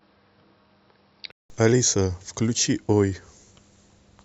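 Input switched to a poorer device, from 0.0 to 1.5 s: the speech opens band-limited, with nothing above 5.5 kHz, likely because the recording started on a lesser microphone. A 188 ms silence marks the switch, after which the fuller sound returns at much the same level.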